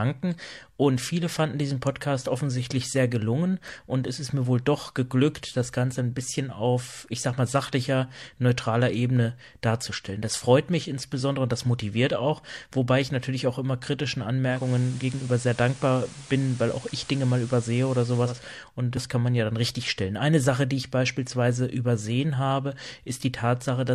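At 14.44 s, just after "natürlich auch immer kritischen", the speech shows digital radio blending to analogue: the receiver lost the digital stream and cross-faded over 266 ms to the station's FM signal. Hiss rises to roughly 20 dB below the speech, while the level stays matched. At 18.48 s the receiver blends back to digital, removing the hiss.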